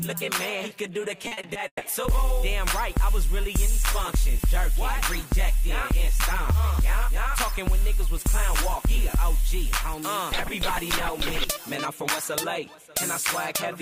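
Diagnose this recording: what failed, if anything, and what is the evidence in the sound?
What failed is the network leg: there's a burst of repeated packet loss, the robotic-sounding kind, from about 1.27 s to 1.83 s. In that half-second the sound chops into five dropouts, the longest about 140 ms, and each hole gets papered over by the receiver stretching out the last bit of audio it had. That patching covers nearly half the stretch, which is why it comes across choppy with pieces missing.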